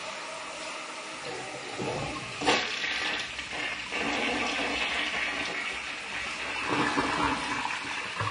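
An everyday-sound recording carries plainly audible AAC compression damage from start to finish. It sounds dull and smeared, with a warbling, fizzy texture on sustained and noisy parts. The likely cause is AAC-LC encoding at a low rate, which fits roughly 32 kbps. On a spectrogram this would show as a hard ceiling where the encoder lowered its cut-off, with holes and blotchy, noise-filled patches in the upper bands. The waveform envelope looks fairly normal, since the damage is spectral.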